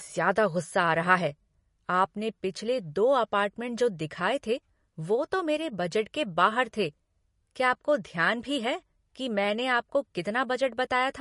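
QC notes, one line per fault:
Throughout: MP3 compression. The speech sounds watery and swirly, with sibilants breaking into metallic chirps and consonant onsets smeared. Nothing remains above about 11.1 kHz, a hard ceiling that points to a low bitrate near 40 kbps. The likely cause is an MP3 encoder starved of bits, cutting the treble and dropping weak frequency lines. On a spectrogram this shows as a flat shelf at 11.1 kHz with speckled, blotchy holes flickering between frames below it.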